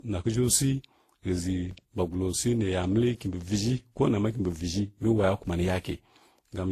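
Transcoding between lossy codecs runs through the whole speech clip. Nothing is present above 14.2 kHz, and the smearing and swirl of a low-rate codec sit alongside a second, differently textured layer of coding artefacts. The likely cause is a chain of three encoders, one that sounds like Opus at around 24 kbit/s, then one like Vorbis, then WMA 1 at a higher rate. Each later stage spent its bits re-encoding the earlier damage while keeping the lowest bandwidth limit.

A DC step occurs at 1.71 s, when the waveform's zero line suddenly shifts and produces a low thump. The offset holds until 5.47 s, where the baseline jumps back and gives a second thump. Between those points the speech carries on unchanged on top of the displaced baseline. This behaviour points to a converter recalibrating, or to an offset-carrying input being switched in and then out again.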